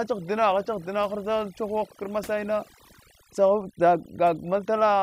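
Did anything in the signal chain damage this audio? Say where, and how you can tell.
Yes. The background drops and breaks up into twinkling specks all the way through. That is overdone noise removal at the processing stage: a suppressor set too hard is switching off frequency bands near its noise estimate, taking the quieter parts of the speech with them.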